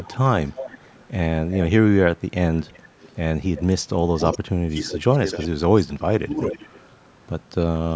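Echo leak occurs from 0.0 to 1.59 s, from 2.63 to 5.48 s and from 6.49 to 7.09 s. A delayed copy of the speech returns 355 to 381 ms late, roughly 15 to 20 dB below it. The likely cause is an echo canceller at a loudspeaker end that failed to remove what its microphone picked up.

Speech suppressed in double talk spans 4.18 to 6.58 s, overlapping the echo. With both sides talking at once, the canceller likely could not separate its own talker from the echo and turned everything down. The speech dips by up to about 25 dB, in pieces adding up to roughly a second.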